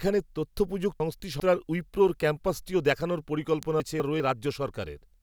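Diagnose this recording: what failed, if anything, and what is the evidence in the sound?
Chunks out of order at 1.0 to 1.4 s and again at 3.8 to 4.2 s, a driver or buffer fault: a 200 ms block arrives one chunk late and plays after its successor, jumbling the speech. Waveform and spectrogram show abrupt discontinuities and vertical broadband lines at each join, with formant tracks breaking and resuming out of sequence.

An electrical switching spike at 3.63 s, in the analogue wiring: a single sharp snap sits on top of the speech without interrupting it. The waveform shows a narrow, tall transient, and the spectrogram a thin full-band vertical stripe. Its likely cause is a nearby switch arc coupling into the line.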